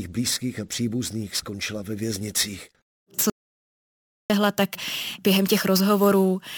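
At 3.30 s the speech cuts out in an audio dropout to silence, returning mid-flow at 4.30 s on "tak během". The full second is silent with no room tone, likely from lost input while recording continued: a flat waveform line and a blank spectrogram band.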